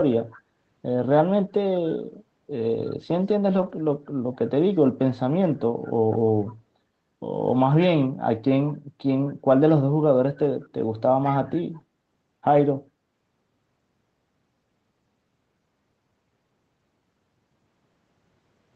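At 0.31 to 0.41 s a faint delayed copy of the speech appears, about 185 ms behind the original and roughly 25 dB down. This is an echo leak, likely from a far-end loudspeaker whose echo canceller let some of the played-back signal through. Its fixed delay distinguishes it from room reverberation, which would trail off smoothly rather than repeat as a distinct copy.

From 3.57 to 3.71 s there is a lost packet rebuilt from error correction, with about 80 ms of audio replaced by low-bitrate copies carried in the following packets. The speech stays continuous with no gap or mute, but it turns briefly rougher and noisier. That continuity separates it from concealment of a plain loss, which smears or fades the sound.

The same echo leak returns at 6.46 to 6.53 s, quieter at roughly 30 dB down, and again at 11.24 to 11.30 s at roughly 25 dB down, both with the same 185 ms delay. Throughout, the Opus call path limits the audio to an 8 kHz band.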